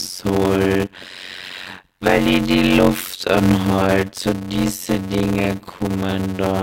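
The speech is chopped by a block size mismatch (padded) throughout. One stage delivers blocks shorter than the next stage reads, and the remainder of each read is zero-filled. This produces a steady 91.9 Hz buzz and stretches the speech to 0.533 times normal speed while its pitch stays about right. The ratio fits 256-sample blocks padded out to 480. On a waveform, regular flat silent gaps interrupt the signal. A spectrogram shows evenly spaced vertical stripes with harmonics of 91.9 Hz.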